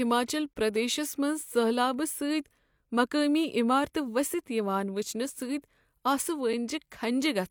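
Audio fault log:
0.53–0.56 s and 6.53 s, gap between stream segments: the sound stops dead for about 22 ms, then for about 5.5 ms, while the player fills a timestamp gap between two stream segments with silence. Both holes are 6 s apart, which fits 2-second segments. Nothing is lost; the timeline is just stretched. On a waveform, each is a flat, near-silent stretch with abrupt edges. On a spectrogram, each is a thin blank vertical stripe, edged by broadband clicks.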